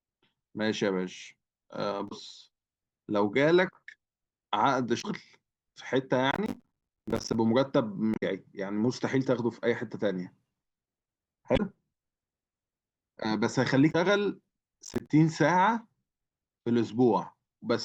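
At 2.05 to 2.12 s the speech breaks into a short glitch. This is damaged data in a compressed stream. Bad bytes reach the decoder, which misreads the frames, loses sync and hunts for the next frame header. The same blip returns at 4.98 to 5.05 s.

From 6.31 to 7.35 s a gritty crackle tears through the sound. This is processor overload crackle. The processor keeps missing its deadlines, and each late buffer drops out to silence. The gaps are very short, which fits buffers of roughly 10 ms. Around fifty are lost in this stretch, and their hard edges merge into a rough burst.

Another glitch from damaged compressed data falls at 8.11 to 8.23 s. It is slightly longer than the others. Two more follow, at 11.53 to 11.60 s and at 13.88 to 13.95 s.

At 14.85 to 15.10 s the overload crackle comes back as a shorter burst. About fifteen buffers drop to silence. It stops once the load eases.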